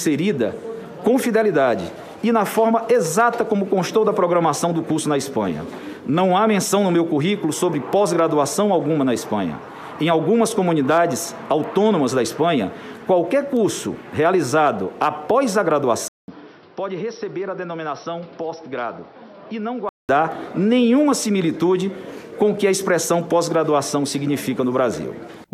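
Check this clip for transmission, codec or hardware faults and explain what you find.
One fault is present. From 16.08 to 20.09 s the input likely switched to a poorer device. After a 200 ms gap, its narrower band cuts everything above 5.8 kHz, while its own level sits about 10 dB lower and it adds a fresh noise floor.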